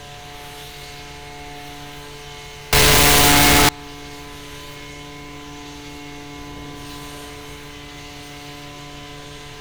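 From 2.73 to 3.69 s, 8-bit samples were likely read with signed and unsigned mixed up, flipping the top bit so every zero crossing leaps across the full range. The sound turns into loud, harsh distortion, with quiet moments as loud as everything else, over the ordinary grain of the 8-bit audio.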